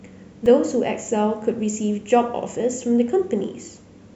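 At 0.46 s in this speech clip, new audio failed to reach the output in time, so the device played its most recent buffer a second time, a repeated buffer fault. The repeated piece is only about 1.45 ms long, which fits a 64-sample buffer, and roughly a millisecond and a half of audio is lost. With a piece that short, the hard joins at each side of the repeat are heard as a click or brief buzz.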